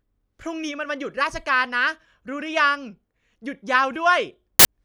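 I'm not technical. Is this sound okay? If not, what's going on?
No. Near the end, the player has read part of the file that isn't sound at all, here the stored cover picture, and played it as audio. This fault is called file tags played as audio, and it gives a loud, harsh burst of static with abrupt edges from 4.59 to 4.65 seconds.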